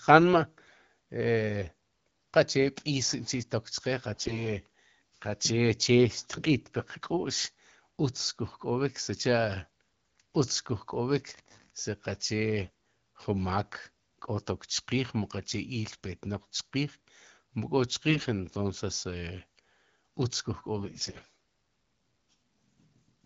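AMR bit errors at 0.62–0.76, 4.14–4.45, 12.62–12.68, 18.09–18.28 and 20.76–21.25 s: around 7 percent of the weakly protected frame bits in the first event and about a tenth in the others arrive flipped, so the speech turns hoarse and gargly. On a spectrogram this appears as smeared, noisy harmonics, while the waveform keeps its level. The underlying AMR-WB coding at 12.65 kbit/s stays clear.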